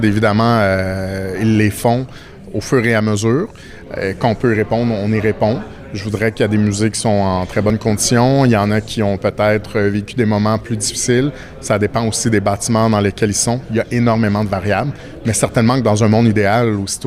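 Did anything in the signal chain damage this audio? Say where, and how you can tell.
Yes. There is an overlap between stream segments during network playback. Mis-stamped 4 s segments made the player trim real audio: 8 ms at 7.7 s and 15 ms at 11.68 s, each heard as a tiny skip.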